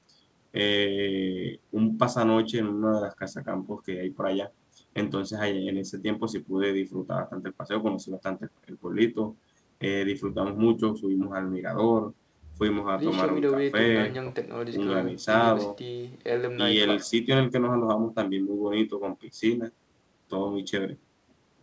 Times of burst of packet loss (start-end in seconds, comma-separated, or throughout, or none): none